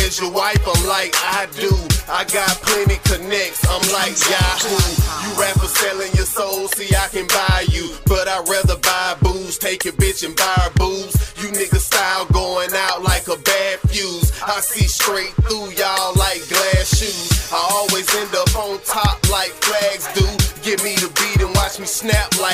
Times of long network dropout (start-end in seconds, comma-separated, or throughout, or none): none